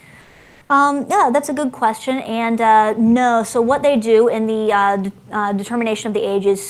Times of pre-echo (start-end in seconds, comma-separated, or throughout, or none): none